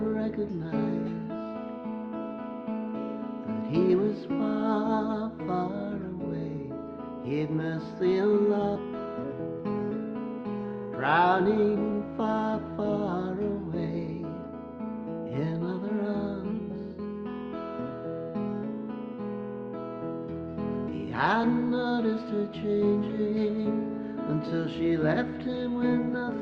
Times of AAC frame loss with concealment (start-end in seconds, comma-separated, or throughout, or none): none